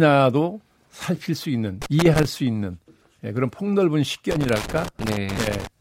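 At 1.82 s the speech breaks into loose connector crackle, lasting until 2.25 s. It returns at 4.31 s and runs to 5.67 s, a longer stretch. A worn or dirty contact in the signal path is opening and closing many times as it shifts. Each break chops the audio. Any DC on the line turns the breaks into pops. The result is an irregular burst of scratchy crackle over the speech.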